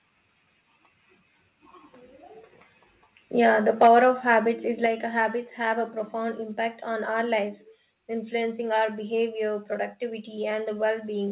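From 3.81 to 4.34 s the loudest syllables turn harsh and crackly, with their peaks flattened. This is microphone overload, likely from input volume set about 4 dB too high, so a small share of the waveform tops hits the converter ceiling. Unlike codec grit, the distortion appears only on peaks.

At 3.87 s, inside that distorted stretch, the level drops about 3 dB in one step. At 4.86 s, just before "habits have a profound", it drops about 4 dB more. Both are the microphone volume stepped down, likely by call software lowering input gain after clipping. Voice and background fall together instantly, not gradually as with a fade, all within the call path's 4 kHz telephone band.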